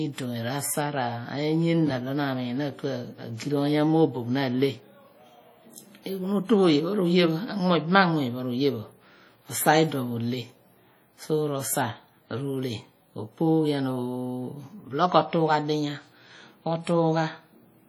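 From start to finish the speech carries heavy WMA compression damage: a ringing, washy smear around each syllable and a hiss that swells and fades with the signal, which fits a rate near 32 kbps. The likely cause is a transform coder with long blocks, which spreads its quantisation error over tens of milliseconds and drops weaker spectral lines. Unlike a lowpassed encode, content still reaches about 20.1 kHz; the damage lies in the smearing and breathing noise rather than missing treble.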